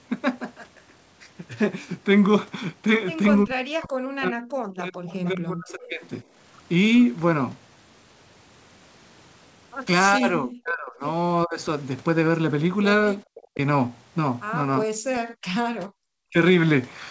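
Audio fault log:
3.45–6.04 s, 10.17–11.03 s, 11.45–11.59 s, 13.29–13.58 s, 15.0–15.52 s and 15.95–16.36 s: speech suppressed in double talk. The voice dips, thins or breaks up in pieces, by up to about 40 dB. Both sides were likely talking at once. The echo canceller then turned the talker down along with the echo.
5.11–5.29 s and 5.7–5.88 s: echo leak. Brief, faint scraps of the voice return 400 ms after the original, about 25 dB below it. Some loudspeaker pickup likely slipped past an echo canceller. It was sent back as a delayed copy.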